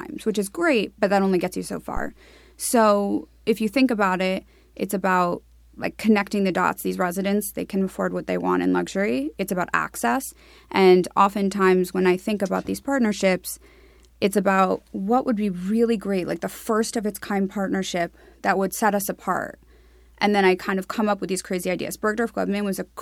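At 1.97 s, just after "only gets you so", a phantom power thump lands: a supply switched on or off on the live input sends a voltage step through the coupling capacitors. The deep low thump, peaking at about -17 dBFS and dying away within 41 ms, carries no breath turbulence, unlike a plosive pop.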